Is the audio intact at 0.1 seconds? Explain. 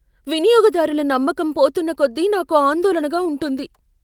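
Yes, the speech at 0.1 seconds is intact, with no fault present at that moment.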